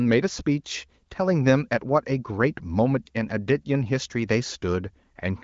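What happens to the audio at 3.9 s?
Nothing goes wrong at 3.9 s: the speech carries on intact through that moment, with the band-limited sound of the AMR wideband (HD Voice) codec running at a rate high enough to keep it clear.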